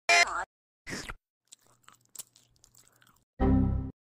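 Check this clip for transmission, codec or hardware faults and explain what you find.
There is one codec fault: a gap at a join of encoded pieces. From 3.35 to 3.38 s, the sound drops out for about 37 ms. The edges are smeared by the codec. Afterwards the sound resumes where it stopped. The audio was encoded in separate pieces and then butted together untrimmed. Each encoder pass leaves its start-up delay and last-frame padding in place. That silence sits in the middle of continuous sound.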